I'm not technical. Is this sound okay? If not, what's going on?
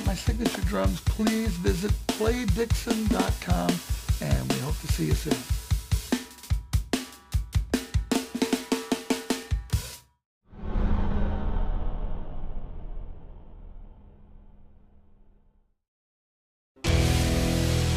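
No, the sound has a rough, metallic edge throughout, caused by periodic clock jitter: interference at around 2 kHz shakes the converter's timing clock.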